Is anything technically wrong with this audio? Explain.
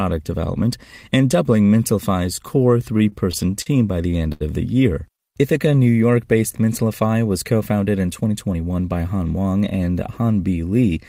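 Yes. The speech has four timing faults from the receiver's jitter buffer, each changing pacing rather than dropping packets.

From 2.98 to 3.68 s there are repeated stalls (stutter). Packets arrived late five times in succession, the buffer ran dry each time, and the receiver held the last sound for about 100 ms in total, the longest gap 39 ms, so the speech drags and catches.

From 4.32 to 4.43 s there is a short stall from a late packet. One packet missed its slot, so the receiver stretched the preceding sound for about 80 ms until it arrived, then resumed where it left off. A sound is held audibly too long, with a slight buzz or dip.

From 5.07 to 5.96 s there is a jitter buffer slow-down. To rebuild its reserve, the receiver repeated single pitch periods and fragments of pauses, adding 87 ms and running the speech at 91% speed. Pitch stays the same, but syllables are drawn out.

From 7.97 to 8.77 s there is a jitter buffer speed-up. 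Holding more audio than it needed, the receiver trimmed short pieces of one or a few pitch periods, roughly a tenth of a second in all, so the speech runs at 111% speed and sounds hurried at the same pitch.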